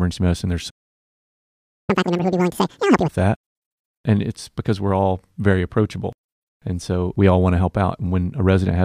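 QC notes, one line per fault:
0.70 to 1.90 s, playback stall: right after "medicine there's" the speech just drops out and you get about 1.2 s of dead silence before it picks up again. It doesn't feel like a pause in the talking. The flow gets cut off mid-phrase and then carries on from the same spot, nothing skipped. That's the classic sound of the player likely running dry on data or getting its thread held up, so the output had nothing to play until it recovered.
1.90 to 3.08 s, catch-up at higher speed: once the sound comes back, the same stretch after "medicine there's" runs at double speed for just over a second. Because it's sped up by resampling rather than time-stretching, the pitch climbs along with the tempo, roughly ten semitones up, so it comes across as a quick, chipmunky burst. The player is burning through the backlog from the stall to get back to real time, then it drops back to normal speed and pitch.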